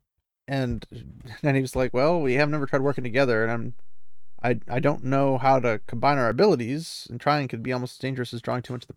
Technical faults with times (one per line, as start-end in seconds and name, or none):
1.82-6.32 DC step